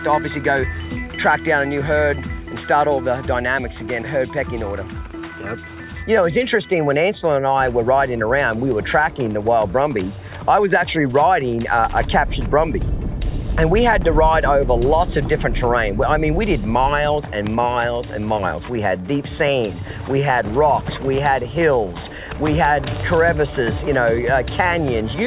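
No technical faults occur at any point, so there is nothing to describe in time order.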